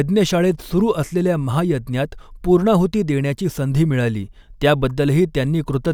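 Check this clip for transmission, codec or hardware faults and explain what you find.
No faults can be heard.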